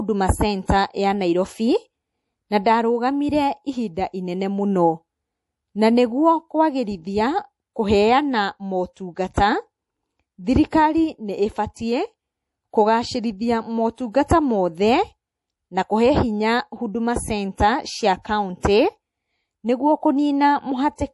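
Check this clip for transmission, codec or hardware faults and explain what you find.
Two codec faults are audible in this speech clip.

Throughout, the speech sounds watery and swirly, with sibilants turning metallic and nothing at all above 11.5 kHz. This is likely MP3 compression at a low bitrate, plausibly around 48 kbps. The starved encoder cuts off the treble and lets weak frequency components flicker frame to frame.

Pre-echo appears at 0.67 s, 9.34 to 9.37 s, 10.71 s, 14.28 to 14.30 s and 18.61 to 18.63 s, lasting 16 to 28 ms each time. A brief hiss precedes each sharp onset, softening it. The codec spreads quantisation noise across a whole block, so the noise meant for the attack leaks into the quiet just before it.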